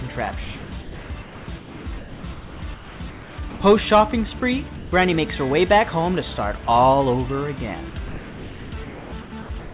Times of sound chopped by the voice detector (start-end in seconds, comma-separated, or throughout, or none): 0.44-3.60, 7.90-9.74